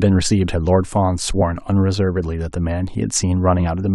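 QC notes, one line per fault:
1.41 s and 3.59 s: damaged data in a compressed stream. Each event is a brief glitch lasting about 14 ms in the speech. The decoder hits corrupted bytes, misreads those frames and, having lost sync, searches for the next frame header. Unlike a plain dropout or a broadband click, the glitch is produced by bad frame data and not by a simple gap or a sample spike.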